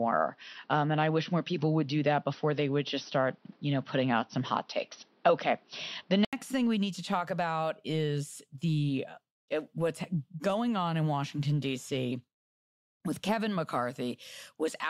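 Input switched to a poorer device, from 0.0 to 6.33 s: the speech has nothing above 6 kHz, sounds dull and boxy, and carries a noise floor roughly 40 dB down. An 80 ms silence and a level change of around 5 dB follow as it clears, likely from a different input device.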